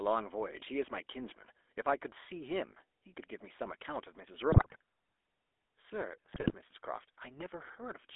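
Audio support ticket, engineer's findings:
GSM full-rate codec, whole clip. Buzzy, gravelly speech confined to roughly 300 Hz–3.5 kHz. Plainly audible codec damage. Pulse-excited vocal-tract model discards fine excitation detail. Sound fits a 13 kbps full-rate path. Nothing survives above 3.5 kHz.

GSM bit errors, 4.52–4.76 s and 6.32–6.55 s. Squawks, pops and gargling. Corrupted filter, pitch and gain parameters reaching the decoder. Spectrum bends and level surges frame by frame. Second burst sounds worse. Points to a weak radio link.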